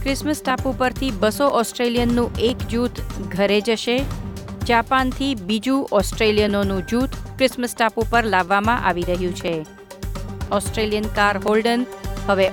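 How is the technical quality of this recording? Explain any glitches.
The recording has regular ticks. From 0.50 s to 12.48 s, a small click lands about once per second, roughly fifteen in all, but only while sound is present. These are periodic USB or driver dropouts. A background task stalls the USB bus or audio driver every 1.0 s, and about a millisecond of audio is skipped outright, so the waveform jumps and clicks.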